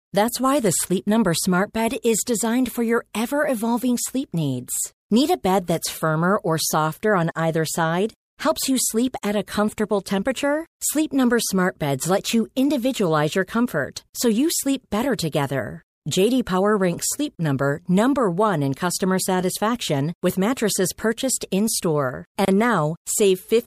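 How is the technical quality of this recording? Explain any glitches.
The speech recording has two short dropouts, each a gap at a join of encoded pieces. The first runs from 17.35 to 17.39 s, lasting 33 ms, and the second from 22.45 to 22.48 s, lasting 28 ms. The pieces were encoded separately and spliced untrimmed, so encoder start-up delay and end padding leave silence that the sound resumes after. Each gap is heard as a brief hole and shows as a thin vertical blank band on a spectrogram, or a flat stretch in the waveform, with smeared edges.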